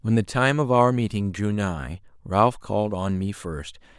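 No technical faults are audible anywhere in the speech recording.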